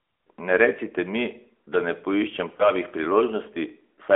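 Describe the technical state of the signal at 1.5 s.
At 1.5 s, as across the whole clip, the speech has passed through an AMR narrowband mobile codec, which models the vocal tract on sparse pulses per 5 ms subframe. The band sits at roughly 300 Hz to 3.4 kHz, and the plainly audible buzzy, synthetic texture fits a 10.2 kbps mode.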